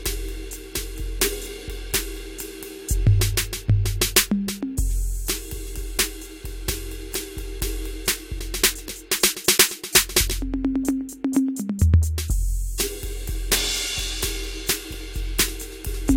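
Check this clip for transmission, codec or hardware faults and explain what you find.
No transmission, codec or hardware faults detected in this music clip.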